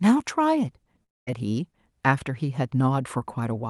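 From 1.03 to 1.29 s, speech fades into a buzz and then silence, likely a long network dropout, too long for a brief packet-loss blip.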